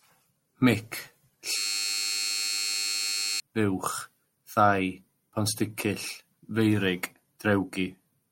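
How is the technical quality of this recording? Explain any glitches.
The recording has one serious glitch: a system hang loop from 1.57 s to 3.4 s. The computer or audio driver stalled while the sound hardware kept replaying its ring buffer. The same 10 ms slice of speech repeats back to back, which fits a buffer about 10 ms long. At 100 repetitions per second, the repeats fuse into a steady 100 Hz buzz instead of a stutter. About two seconds of speech are missing, replaced by that drone.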